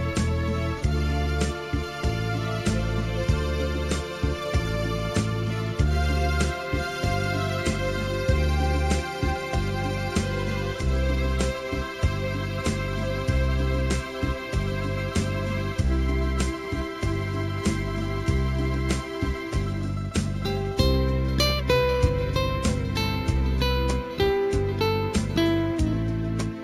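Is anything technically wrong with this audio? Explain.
Yes. Throughout the clip there is imaging from linear upsampling, which points to sound made at 16 kHz and then raised to 44.1 kHz by joining samples with straight lines. That weak filter dulls the top of the band and leaves a mirrored copy of the spectrum between 8 and 16 kHz, roughly 30 dB down, heard as a faint metallic shimmer on bright sounds. On a spectrogram it appears as an upside-down reflection of the lower band above 8 kHz.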